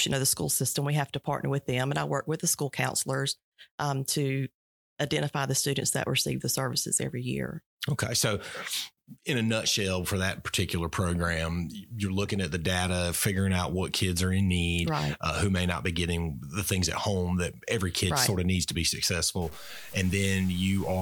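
Low bit depth without dither sets in at 19.42 s, just after "of needs to be", and lasts to 21.02 s. The speech turns grainy and gritty, with a rough distortion that rises and falls with the sound and sits only about 20 dB below it. Quiet stretches sputter or collapse toward silence. The likely cause is truncation to very few levels with no dither, which fits roughly 6 bits. The rounding error tracks the signal instead of forming a steady hiss.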